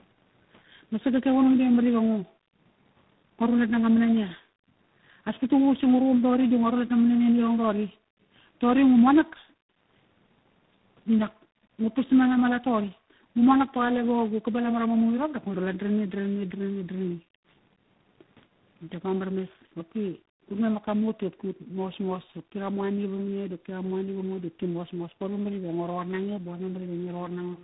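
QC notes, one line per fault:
Throughout, tandem speech coding. Three speech coders in a row each recode degraded output, so the speech sounds rough, muffled and warbly, with nothing above 3.9 kHz.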